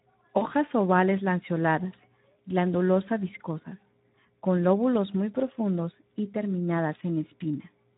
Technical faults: Speex codec; VoIP packet loss concealed by the speech codec

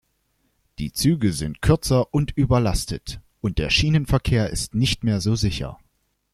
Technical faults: none

